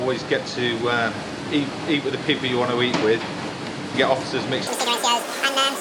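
A wrong sample rate fault starts at 4.67 s and runs to the end of the clip. From that point the sound plays at twice its proper speed and a full octave, 12 semitones, higher. Both shift together because the samples are read out with no rate conversion. The doubling fits audio recorded at 24 kHz being played back at 48 kHz, so the final stretch sounds shrill, hurried and compressed in time.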